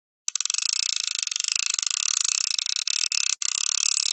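From 2.55 to 3.43 s, packets arrived late or too slowly, emptying the jitter buffer six times. Each time the receiver stretched the last sound forward, about 153 ms in all (longest gap 63 ms, roughly a fifth of the span). These repeated stalls (stutter) make the sound drag and hiccup, though nothing is lost. The call path's upper band stops around 8 kHz.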